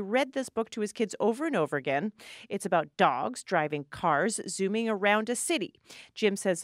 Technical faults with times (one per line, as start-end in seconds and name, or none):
none